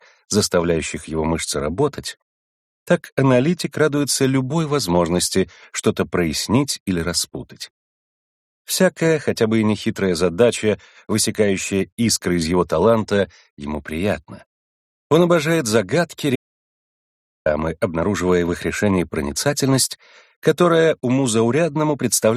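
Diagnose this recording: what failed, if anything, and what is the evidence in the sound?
Audio dropout to silence from 16.36 to 17.46 s: about 1.1 s of dead silence, no room tone, likely a lost input link while recording continued.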